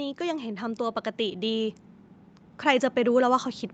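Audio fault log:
0.17–1.81 s, automatic gain rising: the gain control judged the input too quiet and slowly turned it up by about 4 dB, so speech and background noise swell together. On a waveform the envelope widens steadily; a spectrogram brightens evenly across all frequencies.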